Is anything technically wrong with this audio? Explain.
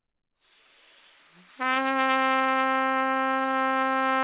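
Yes. There are two short stalls from a late packet, at 1.74 to 1.78 s and 1.82 to 1.86 s. Each time, the next packet had not arrived when due, so the jitter buffer ran dry. The receiver stretched the last bit of sound, about 23 ms and then 19 ms, and resumed where it left off once the packet landed. Nothing is lost, but the sound briefly hangs with a faint buzz or dip, and playback ends up slightly later each time. The audio is band-limited to 4 kHz, which fits a G.711 mu-law call path.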